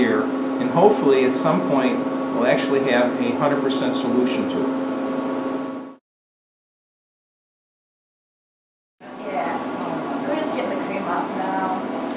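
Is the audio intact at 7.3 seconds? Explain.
Yes, at 7.3 seconds the audio plays through cleanly, with no dropout, click, distortion or other fault to be heard.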